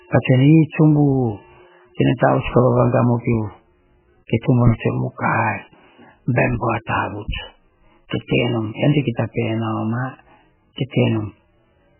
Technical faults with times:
0.00-12.00 MP3 compression

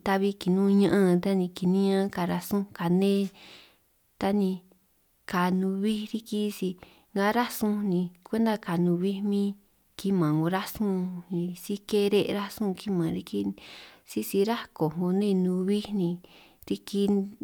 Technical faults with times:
none

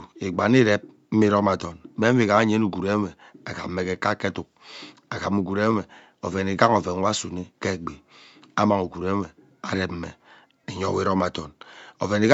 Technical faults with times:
0.00-12.34 Bluetooth LC3 compression

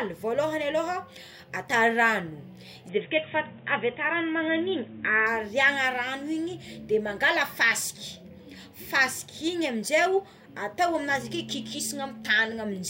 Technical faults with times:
2.89-5.27 input switched to a poorer device

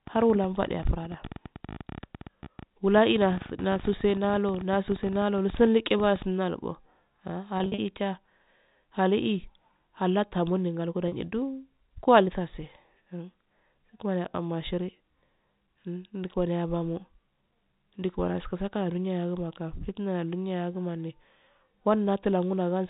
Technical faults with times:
0.07-6.23 train of clicks
7.58-7.78 packet loss with pitch repetition
11.08-11.12 packet loss with pitch repetition

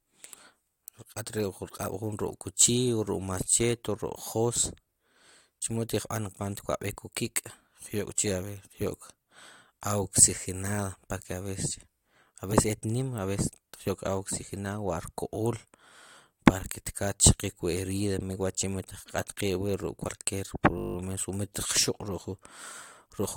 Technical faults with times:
12.52 compressed frames skipped
20.07 compressed frames skipped
20.78-20.96 system hang loop

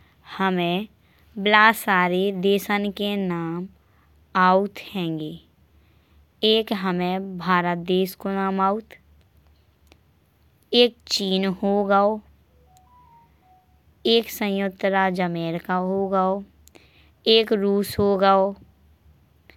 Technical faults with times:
none

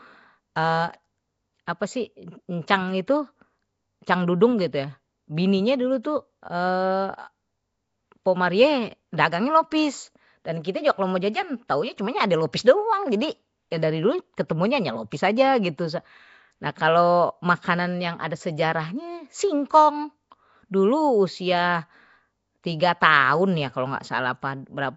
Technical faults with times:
0.00-24.96 Nellymoser compression
1.66 pre-echo
12.53 pre-echo
13.71 pre-echo

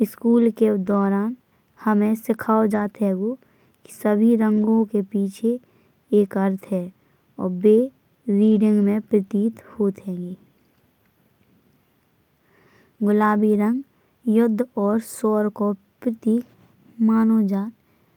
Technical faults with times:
0.85-1.07 lost packet rebuilt from error correction
2.71-2.89 lost packet rebuilt from error correction
4.57-4.63 lost packet rebuilt from error correction
8.43-8.57 lost packet rebuilt from error correction
13.53 lost packet rebuilt from error correction

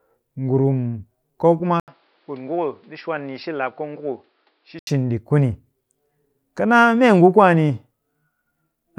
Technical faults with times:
1.80-4.87 input switched to a poorer device

